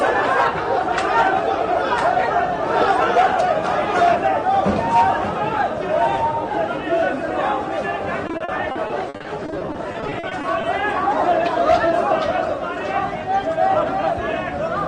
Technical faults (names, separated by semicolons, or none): repeated packet loss (robotic sound)